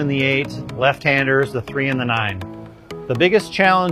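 For the first 2.5 seconds the top end sounds thin and artificial, with a papery, swirling quality in the treble and more obvious codec smearing. At 2.5 s the sound suddenly opens up, with no gap, and the high frequencies now extend to 14.8 kHz. This is an adaptive stream starting at a low bitrate. The player began on a cheap rendition, which fits HE-AAC at around 20 kbit/s, then stepped up to one consistent with AAC-LC near 96 kbit/s once it had measured the connection.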